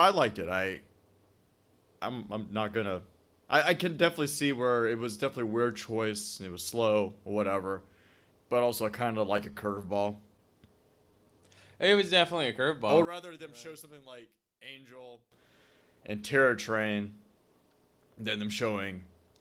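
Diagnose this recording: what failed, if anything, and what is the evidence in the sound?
Network delivery faltered between 9.37 and 9.85 s: packets arrived late, the jitter buffer ran dry four times, and the receiver stretched the last sound to cover each wait. The result is repeated stalls (stutter). About 44 ms was filled, the longest gap was 14 ms, and no speech was lost, but the passage drags in small hitches.

From 10.99 to 11.42 s the jitter buffer was building reserve, repeating single pitch periods to add 52 ms. This jitter buffer slow-down makes that stretch play at 90% speed without any pitch change, so the speech sounds briefly drawn out.

Between 13.05 and 15.32 s the level falls by about 22 dB and the speech turns faint, as if the centred content had cancelled out. The likely cause is one channel inverted at the wiring stage: reversed polarity on one side cancels the shared signal when the two channels are summed to mono.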